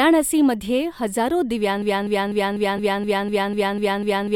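From 1.82 s to the end, a broken-record loop: a 250 ms fragment of speech repeats back to back ten times, likely from a stalled player resending its last buffer.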